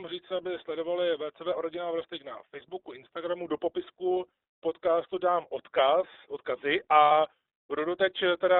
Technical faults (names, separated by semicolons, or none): iLBC codec; lost iLBC frames